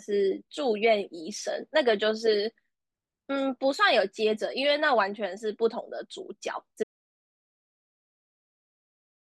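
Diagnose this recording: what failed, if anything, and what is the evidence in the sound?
The speech cuts out mid-flow at 6.83 s and never returns. From there to the end there is silence, with no room tone. This is an audio dropout to silence. The input device or link likely failed, and the recorder kept writing silence.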